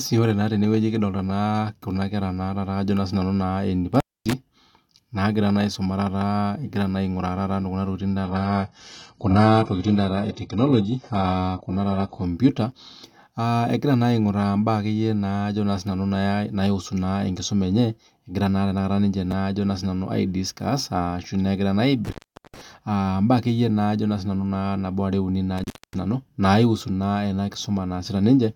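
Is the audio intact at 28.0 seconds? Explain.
Yes, at 28.0 seconds the speech plays through intact, with no dropout, glitch or other fault at that moment.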